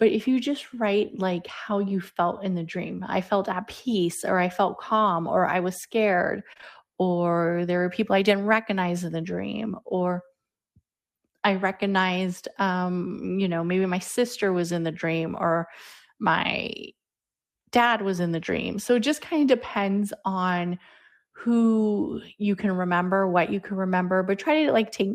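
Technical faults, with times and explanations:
6.53 to 6.64 s, short concealed packet loss: between "or I was scared" and "or there were people", three back-to-back 20 ms chunks arrived too late for the decoder, which papered over them by extending the preceding sound. It filled the first gap fully but only 17 ms and then 10 ms of the later two, so the patch thins into a brief smeared wobble. On a spectrogram the continued sound fades before real detail resumes.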